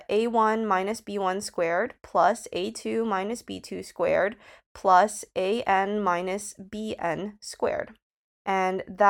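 No technical faults are audible.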